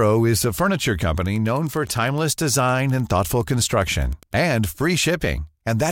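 Wi-Fi interference runs from 1.18 s to 4.6 s, starting just after "is a furniture". The audio circuitry is rectifying a nearby Wi-Fi radio's beacon, sent every 102.4 ms. This produces a steady ticking near ten times a second, about 30 dB below the speech.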